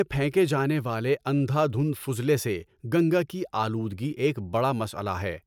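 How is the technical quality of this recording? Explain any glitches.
No technical faults are audible anywhere in the recording.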